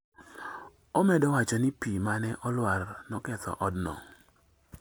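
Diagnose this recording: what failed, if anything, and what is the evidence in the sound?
Nothing in the speech here points to a failure at any stage of the chain, so there's nothing to diagnose.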